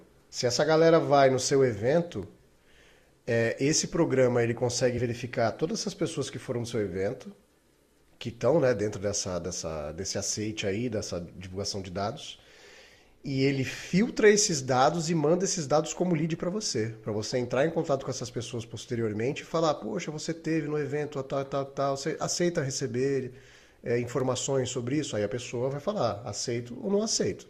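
Brief glitches interrupt the speech at 4.97 s and 24.45 s: compressed frames skipped, each dropping roughly one frame, about 20 ms of audio, so the sound jumps ahead.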